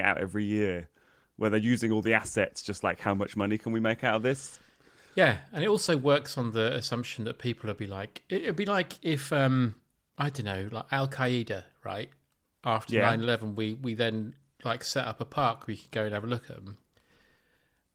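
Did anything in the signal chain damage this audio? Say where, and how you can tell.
No, nothing in this signal chain damaged the audio.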